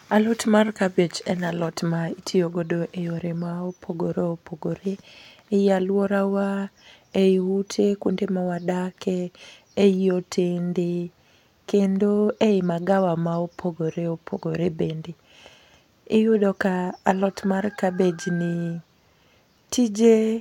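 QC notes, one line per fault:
No faults were heard in this speech recording. Nothing here calls for a QC entry.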